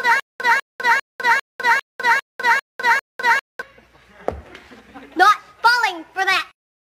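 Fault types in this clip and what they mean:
Stutter with silent gaps: under way from the start until 3.62 s, one 197 ms burst repeats eight times, each followed by 202 ms of digital silence in a steady 399 ms cycle. A stalled player likely replayed its last fragment at each retry, losing the intervening audio.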